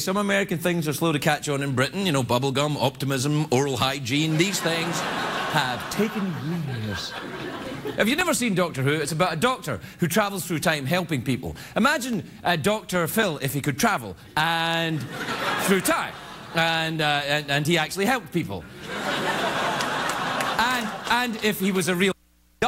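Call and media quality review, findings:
CD scratch ticks, 7.12–9.30 s and 12.13–14.32 s: nine short ticks each burst, about four per second, each a few milliseconds. Disc blemish beyond error-correction reach once per revolution; player interpolating or muting the lost samples, ticks of uneven strength.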